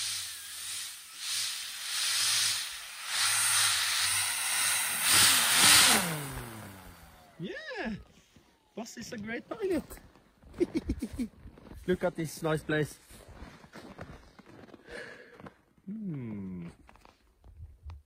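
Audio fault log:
11.97–15.97 s, adaptive stream at a lower bitrate: the player switched to a lower-bitrate rendition for 4 s, likely because the connection slowed, then switched back. The change comes abruptly with no gap. During that stretch nothing remains above 14.9 kHz, and coding artefacts rise, which fits a drop from a mid-rate AAC stream to a low-rate HE-AAC one near 20 kbit/s. The sound turns duller and grainier, then the full treble snaps back.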